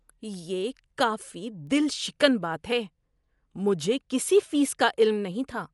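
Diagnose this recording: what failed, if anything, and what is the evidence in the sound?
At the codec stage, the speech was likely squeezed through Dolby Digital compression at a low rate, consistent with something near 64 kbps. The encoder narrowed the band, so nothing remains above 11.5 kHz, and it left many frequency lines without mantissa bits, which the decoder filled with noise. The result is plainly audible throughout: a dull, band-limited sound with a rough, fluttering grain clinging to voiced tones.

At a digital interface, the receiving converter ran on its own clock rather than locking to the sender's, producing word clock ticks. The two clocks differ by something on the order of 15 ppm. Each time they slip past each other, a single sample is dropped or repeated. That gives about four sharp ticks of uneven strength between 0.17 and 4.65 s, arriving at a steady rate of roughly one every one and a half seconds.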